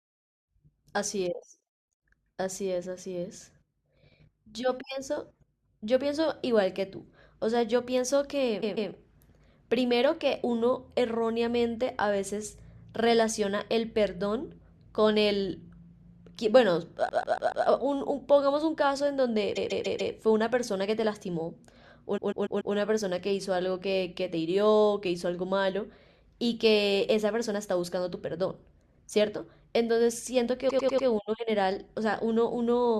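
The speech stutters with repeated frames at 8.61–8.89, 17.08–17.65, 19.55–20.13, 22.17–22.74 and 30.69–31.07 s. A 144 ms block replays two or four extra times, and a 96 ms block four times at the end. The clip runs longer.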